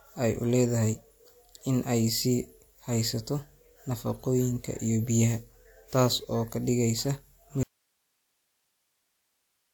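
At 7.63 s the speech cuts out abruptly and does not return; from there to the end only hiss remains, roughly 50 dB below the speech level. This audio dropout to a faint residue likely reflects the signal being lost upstream while the recording path stayed live.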